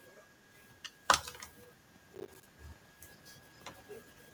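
Processor overload crackle runs from 2.15 to 2.45 s. The processing could not finish its small audio buffers on time, over and over, and each missed deadline was filled with silence. Every tiny dropout has hard edges, so the speech is torn into a gritty burst of crackle for about 0.3 s. The spacing of the gaps points to buffers of around 10 ms, with something like fifteen of them lost, before the load eases.

Echo leak follows from 2.61 to 2.68 s as a brief, very faint copy of the speech, roughly 40 dB below it, arriving 265 ms after the original. It is a short scrap rather than a sustained repeat. The likely cause is a far end playing the call on a loudspeaker, where the echo canceller failed to remove all of what its microphone picked up and sent that residue back down the line.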